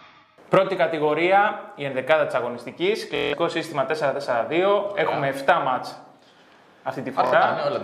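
The audio has Bluetooth stutter twice. From 3.16 to 3.34 s a tiny slice repeats in a rapid machine-gun buzz. About 160 ms of sound goes missing, which fits several lost packets. A shorter burst follows from 7.27 to 7.33 s, losing about 46 ms. In both cases packets arrived late or never. The receiver kept replaying its last buffer. Playback then resumes further on, as if the sound had kept going underneath.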